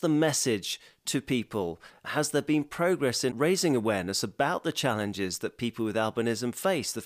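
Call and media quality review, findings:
No audible defects found in the speech path on review; nothing to flag for this clip.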